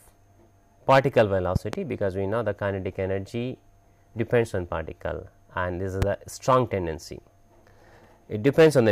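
Loud pops occur between 1.56 and 1.76 s, where two arrive in quick succession, and again at 6.02 to 6.05 s as a single pop, each peaking roughly 15 dB above the surrounding audio, which carries on underneath. The likely cause is a sudden voltage step or pulse, from a plug, switch, static discharge or driver glitch, entering the signal path, with the downstream circuitry shaping that pulse into an audible pop.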